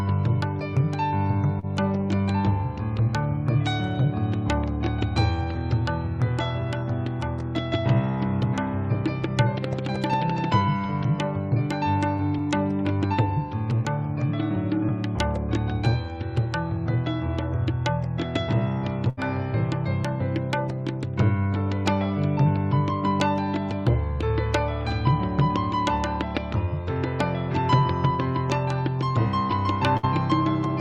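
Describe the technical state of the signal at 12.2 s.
At 12.2 s there is a short concealed packet loss, from 12.18 to 12.21 s. About 20 ms of audio did not reach the decoder in time. The receiver covered the gap by extending the last sound it had, carrying its pitch or shaped noise forward for about 10 ms. It then cross-faded back into the real signal. The result is a brief smear or wobble.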